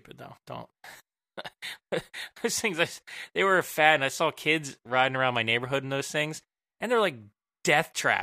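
A speech recording, with no technical fault anywhere in it. Nothing needs a time or a cause.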